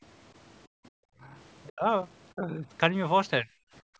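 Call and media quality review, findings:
Background gated by the echo canceller, 0.68–0.92 s and 3.81 s to clip end: room sound drops about 36 and 39 dB while the far-end loudspeaker plays, then returns when the canceller releases.

Speech suppressed in double talk, 1.2–1.34, 1.7–1.85, 2.34–2.65, 3.42–3.52 s: speech dips from slightly to near dropout. Likely the echo canceller confusing near-end speech with loudspeaker echo and attenuating both.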